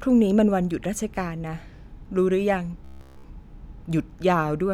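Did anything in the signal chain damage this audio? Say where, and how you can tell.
Yes. Robotic sound from repeated short buffers from 2.85 to 3.24 s: a rigid 66.7 Hz buzz throughout, likely a starved driver buffer looping about 15 ms.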